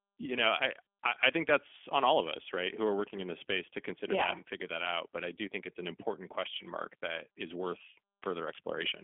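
From start to finish, the speech carries G.729 codec damage. Each frame is rebuilt from a filter model, pitch prediction and a few pulses, which fits an 8 kbit/s VoIP link. Nothing above 3.6 kHz survives. The result sounds thin, rough and plainly synthetic.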